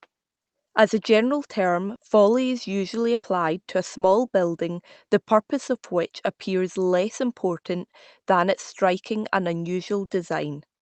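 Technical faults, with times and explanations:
1.95–2.01 s, 3.97–4.03 s and 10.05–10.11 s: short concealed packet loss. Each time about 40 ms of the speech never arrived, and the receiver bridged it by extending the preceding sound before blending back, leaving a brief smear or wobble where a short sound can disappear.
3.13–3.25 s: burst of packet loss. About 100 ms of consecutive audio was lost. The decoder carried the last sound forward and faded it, giving a held buzz or dying hiss, then about 20 ms of silence before speech resumes with that stretch missing.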